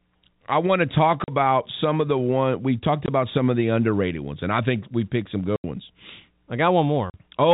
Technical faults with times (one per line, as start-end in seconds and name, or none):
1.24-1.28 packet loss filled with silence
3.06-3.08 packet loss filled with silence
5.56-5.64 packet loss filled with silence
7.10-7.14 packet loss filled with silence
7.43-7.54 hard clipping